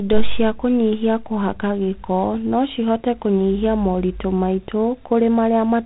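From start to finish the speech carries G.726 ADPCM damage: a harsh, rasping hiss that rises and falls with the speech level, which fits 24 kbit/s coding, where too few bits per sample describe each prediction error. Nothing passes above 3.9 kHz.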